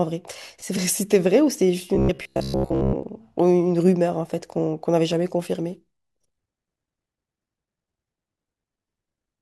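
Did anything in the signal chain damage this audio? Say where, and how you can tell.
Yes. Robotic sound from repeated short buffers runs from 1.95 to 3.03 s. The speech collapses into a rigid, metallic buzz near 66.8 Hz that only loosely follows the talker. That fixed pitch corresponds to a segment about 15 ms long being replayed over and over, with most of the real audio in that stretch skipped. The likely cause is at the driver or buffer stage: fresh data arrived too slowly, so the last short buffer was looped to fill the gap.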